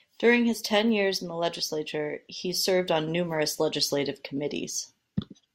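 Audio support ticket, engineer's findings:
No faults found on listening; the speech comes through without any dropouts, clicks, or glitches worth flagging.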